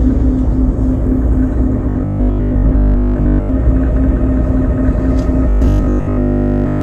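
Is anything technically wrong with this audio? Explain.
Yes. Robotic sound from repeated short buffers appears twice, from 1.89 to 3.49 s and from 5.49 to 6.81 s. The sound turns into a rigid, metallic buzz at 50 Hz. The likely cause is audio arriving too slowly, so the player keeps replaying a fragment about 20 ms long and skips the real material. In the first stretch most of the sound is replaced this way. In the second, all of it is.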